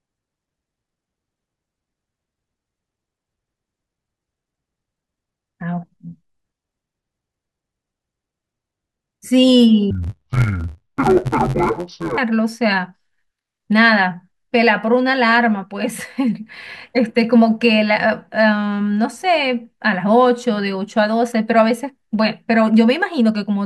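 A speech clip with interleaved audio read as planar from 9.91 to 12.18 s. Each 10.67 ms block's alternating left and right samples get split into halves, which fits a 512-sample buffer. The sound turns dull and robotic, buzzing at about 94 Hz.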